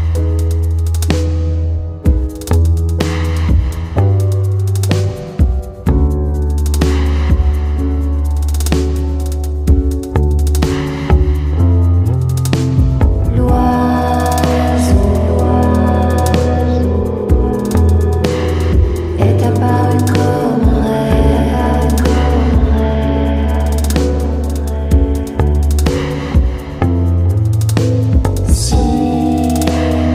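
Nothing here trips any alarm; there's simply no fault to point to anywhere in the recording.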